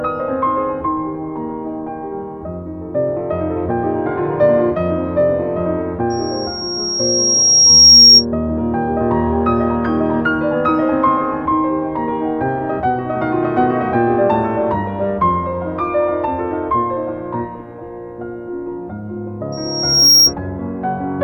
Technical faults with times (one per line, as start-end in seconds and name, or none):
6.10-8.25 loudspeaker feedback squeal
19.52-20.34 loudspeaker feedback squeal